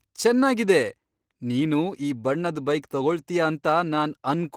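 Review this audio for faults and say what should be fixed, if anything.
Opus voice compression runs throughout the speech, with plainly audible coarse, slightly hoarse and robotic texture. The linear-prediction layer codes the excitation crudely below 8 kHz and a thin transform layer fills above, which fits about 16 kbps in hybrid mode. Unlike a low-pass, content still reaches about 20.2 kHz. Encode at a higher Opus bitrate, or keep an uncompressed master and compress only for delivery.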